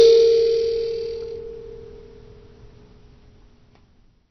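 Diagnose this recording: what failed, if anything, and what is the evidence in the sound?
Codec stage, throughout: the music sounds dull and smeared, with nothing above 6 kHz and a warbling, fizzy texture, likely AAC compression near 24 kbps. A plain low-pass filter would not warble.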